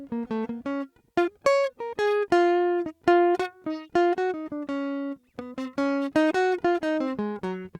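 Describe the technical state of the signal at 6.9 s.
At 6.9 s the music is intact, with no dropout, distortion, glitch or other fault audible at that moment.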